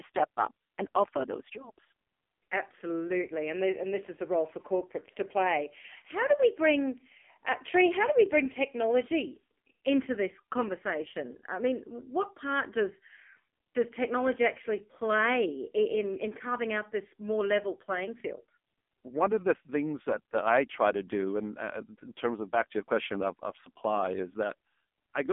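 AMR narrowband mobile codec damage runs throughout: nothing above 3.6 kHz survives, and the heavy buzzy, synthetic quality fits a low mode around 5.9 kbps.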